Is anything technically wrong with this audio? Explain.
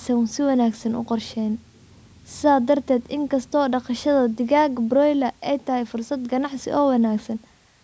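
No, nothing is technically wrong with this audio.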